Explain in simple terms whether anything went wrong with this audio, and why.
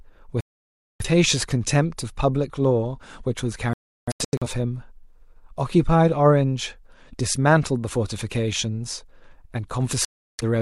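The speech drops out to silence three times: from 0.41 to 1.05 s, in several short gaps between 3.73 and 4.48 s, and from 10.05 to 10.43 s. This is a digital broadcast dropout. The receiver lost the signal and muted, so those moments are gone for good.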